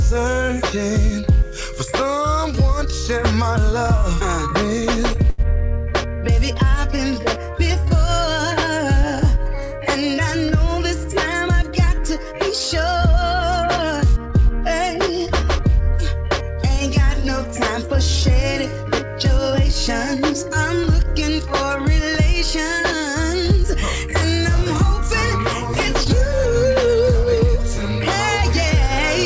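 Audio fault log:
5.30–5.41 s, short stall from a late packet: a packet arrived late, the jitter buffer ran dry, and the last sound was stretched for 85 ms with a slight buzz or dip. Unlike packet loss, nothing is skipped; playback resumes exactly where it paused, adding 85 ms delay.
11.49–12.97 s, jitter buffer speed-up: the buffer held extra delay, so the receiver trimmed short pitch-period slices repeatedly, removing about a tenth of a second. Audio runs at 106% speed and sounds hurried, but pitch stays put, unlike a resampling error, which would raise it.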